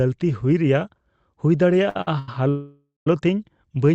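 At 1.89, 2.01 and 2.19 s, short stalls from a late packet hold the current sound for 60, 56 and 89 ms with a faint buzz, then resume with nothing lost. From 2.49 to 3.07 s, a call audio freeze, likely caused by packets held up in transit, stretches the sound into a fading buzz that ends in about 170 ms of silence. This 575 ms gap, rather than a brief hold, is what sets it apart from the stalls.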